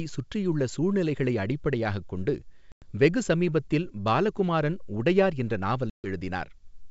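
Packet loss on an ADPCM call hits twice. At 2.72 to 2.88 s, after "சுற்றியுள்ள சூழ்நிலைகளை அடிப்படையாகக் கொண்டு", a hard-edged silent hole of about 100 ms opens, roughly ten packets' worth. The speech then resumes slightly distorted, because the decoder's predictor and step size have drifted from the sender's. At 5.90 to 6.08 s, after "சமீபத்தில் பாலகுமாரன் உடையார் என்ற", a longer gap of about 140 ms follows with the same disturbed restart.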